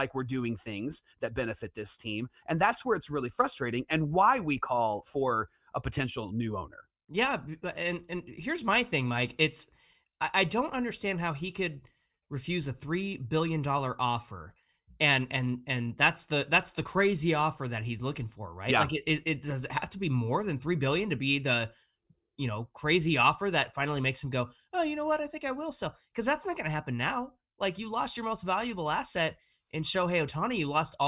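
No technical fault can be heard anywhere in the recording, and the signal holds steady without any break, glitch or disturbance along the way.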